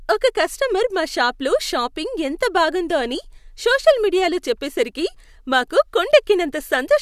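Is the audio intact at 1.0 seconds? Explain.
Yes, at 1.0 seconds the speech plays through cleanly, with no dropout, click, distortion or other fault to be heard at that moment.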